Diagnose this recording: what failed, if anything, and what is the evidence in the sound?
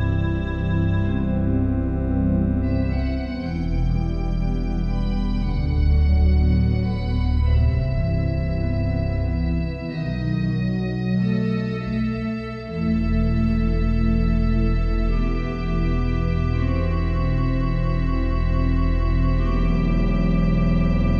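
Nothing in this recording points to a failure at any stage, so there's nothing here to trace back to wiring, conversion, buffering, processing, transport or storage.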